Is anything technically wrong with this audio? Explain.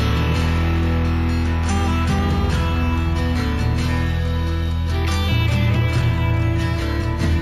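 Yes, there's imaging from linear upsampling across the whole clip. The rate was raised by joining samples with straight lines, a weak interpolation filter, and the sound points to a 16 kHz source brought up to 48 kHz. So the top of the original band sounds dulled, and a faint mirrored copy of the spectrum sits from 8 kHz to 16 kHz, roughly 35 dB down. It comes across as a light metallic shimmer on the brightest, hissiest parts.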